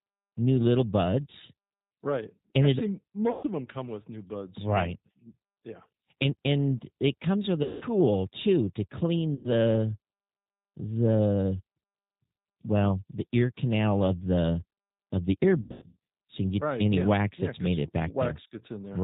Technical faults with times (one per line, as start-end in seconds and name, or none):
0.00-19.03 G.729 codec
3.31-3.45 VoIP packet loss concealed by the speech codec
7.63-7.85 VoIP packet loss concealed by the speech codec
9.35-9.53 VoIP packet loss concealed by the speech codec
15.61-15.97 VoIP packet loss concealed by the speech codec